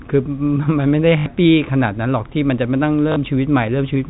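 Short speech clip over a telephone-band G.711 path, with two robotic stutters from packet loss with the last packet repeated: 1.18 to 1.26 s (80 ms) and 3.12 to 3.16 s (40 ms). Looped chunks buzz, which fits 20 ms packets.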